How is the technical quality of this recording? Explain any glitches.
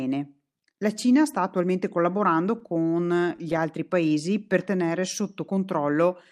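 The recording has two timing glitches, both from late-arriving network audio.

From 2.59 to 3.59 s there are repeated stalls (stutter). Nine short gaps, none over 18 ms, are bridged by stretching the last sound. The speech drags and hiccups, but nothing is lost.

From 4.02 to 5.22 s there is a jitter buffer slow-down. The receiver repeats pitch periods to add about 79 ms. The speech plays at 94% speed with unchanged pitch, sounding drawn out.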